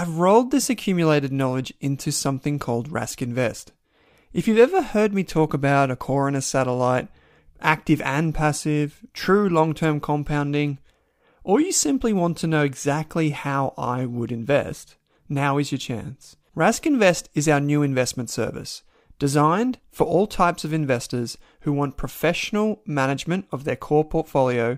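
No technical faults can be heard anywhere in the speech recording, and the signal stays stable and continuous throughout.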